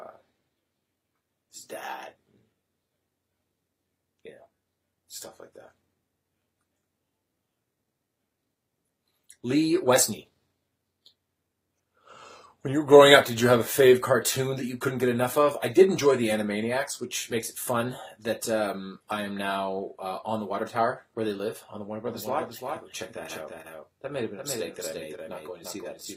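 A doubled audio track begins abruptly at 22.07 s and runs to the end: a second full-band copy trails the original by roughly 300 ms, about 5 dB quieter, with no decay or room colour, likely from the same signal arriving again through a slower capture path.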